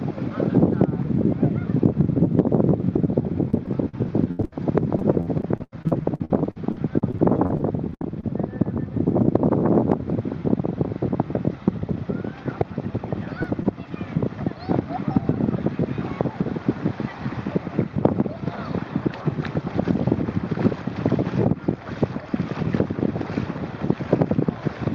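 From 3.50 to 8.32 s there is repeated packet loss (robotic sound). Holes arrive one after another, and each is filled by stretching the preceding sound, so the passage turns choppy. The density of the breaks suggests a couple of dozen losses. Nearly a second of material is patched in all, roughly a fifth of the stretch, with the longest gap 82 ms. On a spectrogram the harmonics freeze into flat, smeared bands repeating at short intervals. The waveform shows looped, near-identical segments broken by abrupt joins.

Between 13.08 and 13.91 s come scattered short gaps, about three isolated losses, none longer than around 15 ms. Each is bridged by briefly extending the last sound, covering only a few percent of the span. They register as brief ticks or tiny hiccups rather than a change in texture. A spectrogram would show thin vertical seams or momentary smears in otherwise continuous bands, and the waveform would show small discontinuities at those points.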